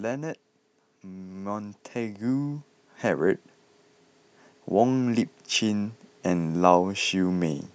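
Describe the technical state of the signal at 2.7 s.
At 2.7 s automatic gain rising is under way: from 1.02 to 3.47 s the gain control lifts its level by about 9 dB, so speech and background swell together.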